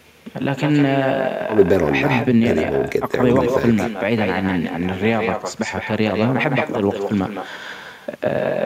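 Speech, with echo with no canceller running throughout: the far end plays the call over a loudspeaker, its microphone picks it up, and nothing subtracts it. Every phrase returns roughly 150 ms later as a thinner copy, about 7 dB below the original.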